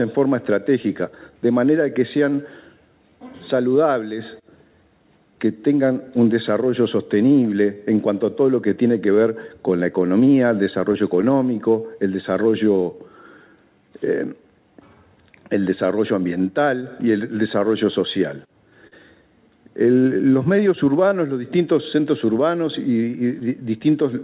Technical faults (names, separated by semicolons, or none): clock drift between sender and receiver; repeated timing corrections; short stall from a late packet; scattered short gaps